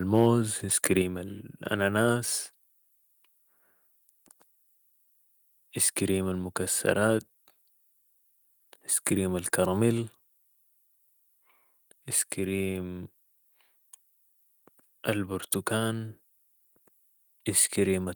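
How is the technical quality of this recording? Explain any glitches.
The recording has clear technical faults near the start: two bursts of clipping and a sudden drop in level within the first second.

From 0.13 to 0.28 s and again from 0.84 to 0.86 s, the speech peaks are flattened, which sounds like microphone overload. The input level was likely set too high, driving the converter about 2 dB and then about 5 dB past full scale. This shears the tops off a few percent of samples and leaves a harsh, crackly edge on those loud syllables.

At 1.02 s, just after the second distorted peak, the whole signal, speech and background together, drops by about 4 dB in a single step. This is the microphone volume being stepped down, likely by call software reacting to the clipping by cutting the device's input gain.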